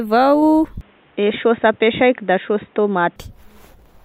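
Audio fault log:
0.81–3.16 s, input switched to a poorer device: speech turns dull, likely a narrower-band input. Spectrogram is empty above 3.8 kHz, with a faint new noise floor. Waveform level is unchanged.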